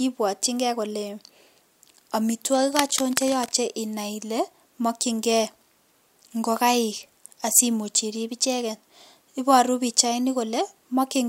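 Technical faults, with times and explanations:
2.54 to 3.53 s, cable scratch noise: for about a second there's a dense, ragged burst of scratching and rustling laid over the speech, sitting only around 10 dB below it. The likely culprit is a worn cable or connector being shifted, so the contact resistance jumps around rapidly and dumps uneven bursts of noise straight into the signal until the movement stops.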